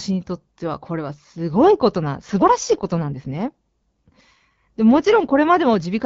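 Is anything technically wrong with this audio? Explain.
Yes. From 2.63 to 5.43 s an AMR rate drop makes the speech rougher and more synthetic, with no gap or bandwidth change, which fits the AMR-WB HD Voice codec stepping down from 12.65 to 8.85 kbit/s.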